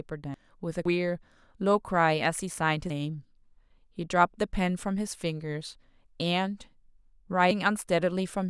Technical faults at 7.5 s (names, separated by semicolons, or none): dropped buffer (overrun)